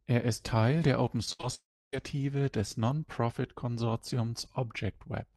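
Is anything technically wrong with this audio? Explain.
Yes, there is a cluster of packet-loss problems between about 1.25 and 1.94 s. The audio is band-limited near 12 kHz, which fits an Opus call path.

Short concealed packet loss occurs at 1.25–1.29 s and again at 1.41–1.45 s. Each time, about 20 ms never arrived, and the decoder extrapolated the preceding sound, giving a brief smear or wobble.

A burst of packet loss at 1.33–1.41 s drops roughly 60 ms. Concealment stretches the last sound into a decaying buzz or hiss, then the audio resumes further on.

At 1.55–1.94 s, about 0.38 s of audio goes missing, likely a long network dropout. A short fading continuation gives way to roughly 0.29 s of silence before the audio returns.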